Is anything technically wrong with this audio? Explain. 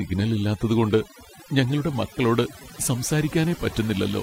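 Yes. Throughout the speech, the background drops and breaks up into twinkling specks. This is overdone noise removal: noise reduction set too strong switches individual frequency bands down or off, taking quieter parts of the voice with them.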